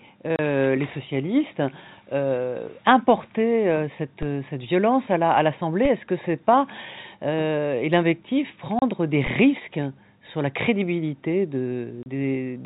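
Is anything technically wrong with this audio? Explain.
Yes. There are two kinds of fault in this speech. The narrow telephone band, with nothing above 4 kHz as expected from G.711 coding, is not one of them.

Packet loss filled with silence occurs at 0.36 s, 8.79 s (just after "c'est pas et l'invectif") and 12.03 s (just after "sur la crédibilité"). Each gap lasts 30 ms, which points to a single lost packet each time. The receiver had nothing to play and substituted digital silence, so the speech drops out abruptly. On a waveform each gap is a flat line with sharp cut-offs, and on a spectrogram it is a clean vertical blank stripe with broadband click lines at its borders.

DC steps occur at 4.23 s, between "importer euh" and "euh cette violence à", and again at 5.85 s. At each point the waveform's zero line jumps suddenly and then drifts back, which fits a high-pass around 20 Hz draining the offset away. 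The speech carries on unchanged, but each jump is heard as a low thump. A waveform shows the whole trace lifting off centre and sagging back over a fraction of a second. A spectrogram shows a brief low-frequency smear with a faint broadband tick at onset.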